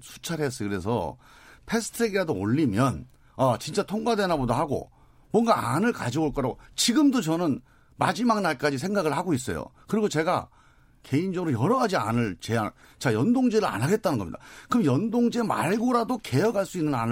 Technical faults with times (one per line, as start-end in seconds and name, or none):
none